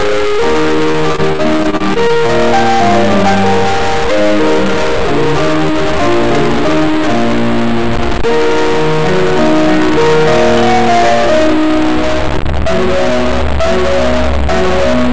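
A music clip with a noisy, distorted grit running the whole way through, and the quiet moments filling with hiss. That's most likely a stuck bit: one data bit pinned high or low, throwing about half the samples off by a fixed amount. From 0.92 to 2.31 s there's repeated packet loss (robotic sound): fourteen short gaps, the longest 32 ms, each patched by stretching the previous sound, so the passage goes choppy with pieces missing. The top end stops at 8 kHz, which fits a G.722 call codec at 64 kbps.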